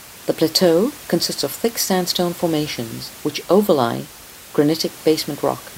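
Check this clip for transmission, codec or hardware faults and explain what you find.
No transmission, codec or hardware fault can be heard in the speech, and the only other sound is the room's own background noise, which sits about 19 dB below the voice and belongs to the recording rather than the signal chain.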